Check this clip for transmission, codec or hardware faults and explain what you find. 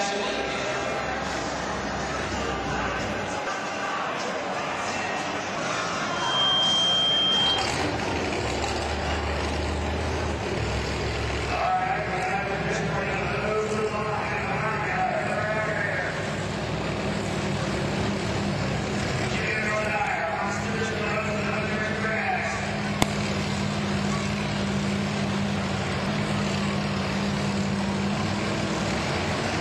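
Two kinds of fault are present: damaged data in the compressed stream, and a loudspeaker feedback squeal.

Damaged data in a compressed stream appears at 3.44–3.48 s and at 5.55, 10.58, 23.02 and 26.06 s. Corrupted bytes make the decoder misread frames and hunt for the next header. Each event is a brief chirp, squawk, click or hole: a narrow broadband streak or gap on a spectrogram.

A loudspeaker feedback squeal runs from 6.06 to 7.79 s. The microphone picks up its own loudspeaker, and the loop gain exceeds one at 3.2 kHz. The tone swells over roughly 0.4 s to about 5 dB above the signal, showing as a bright horizontal line on a spectrogram.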